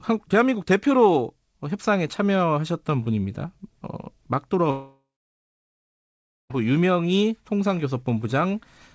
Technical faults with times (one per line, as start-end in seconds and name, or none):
4.71-6.51 long network dropout